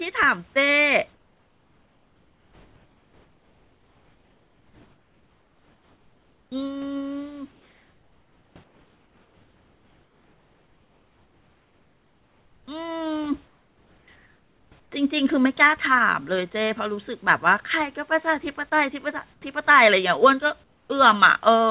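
Sound chopped by the voice detector runs from 0.24 to 6.52 s, most likely caused by the sender's voice activity detection switching transmission on and off repeatedly. Roughly 5.4 s of that stretch is replaced by synthetic comfort noise, so quiet syllables and word edges vanish into a featureless hiss. The speech sounds choppy, with the real room noise sitting about 39 dB below the speech.

Comfort noise in place of the background appears from 7.52 to 14.92 s, again from 18.70 to 19.42 s, and once more from 20.64 to 20.90 s. The likely cause is discontinuous transmission: the sender stops sending during pauses, and the receiver synthesises noise shaped to resemble the background. About 6.4 s, 0.1 s and 0.26 s respectively are replaced. In the last instance the fill drops about 5 dB in level, and the smooth, detail-free noise replaces a background roughly 40 dB below the loud speech.

Sound dropped by the voice detector occurs at 18.70 s, likely because the detector mistook part of the sound for background and stopped sending. 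About 10 ms of real sound is lost and filled with comfort noise. The result is a tiny gap where steady noise briefly takes over before the speech resumes. Throughout the clip, the telephone-band call path leaves nothing above 4 kHz, so all of these fills share the same narrow, band-limited character.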